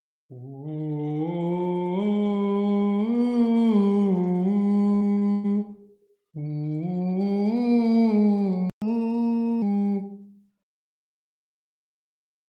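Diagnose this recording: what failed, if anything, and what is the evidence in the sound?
Network stage: repeated packet loss (robotic sound) from 4.95 to 5.46 s. Four gaps, the longest 123 ms, are patched by extending prior audio, making it choppy. The spectrogram shows smeared, repeated frames.

Playback stage: the sound cuts out for 120 ms at 8.70 s, a playback stall, likely a buffer underrun. The waveform shows a flat, silent gap before the audio resumes.

Playback stage: catch-up at higher speed from 8.82 to 9.62 s. The backlog plays at 1.15x, raising the pitch about two semitones. On the spectrogram, components shift upward, compress in time, then settle.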